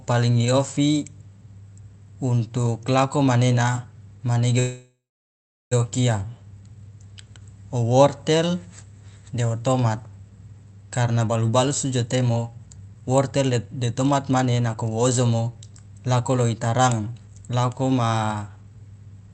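At 4.59 s the speech halts in a call audio freeze lasting until 5.73 s. The final sound smears into a fading buzz or hiss, then 0.74 s of silence. A spectrogram shows a smeared band tapering to blank space. The likely cause is delayed packets emptying the jitter buffer, so nothing is lost.

From 11.2 s to 19.28 s a jitter buffer speed-up plays the speech at 111% speed without changing its pitch, cutting roughly a second by dropping pitch-period slices. It sounds hurried. The waveform shows syllables packed closer together, and the harmonic spacing stays unchanged in the spectrogram.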